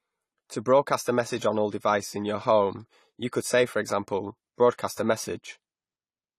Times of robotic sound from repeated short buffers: none

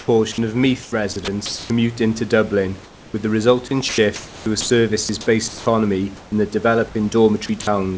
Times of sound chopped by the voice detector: 0.32-1.70, 3.89-5.66, 7.46-7.67

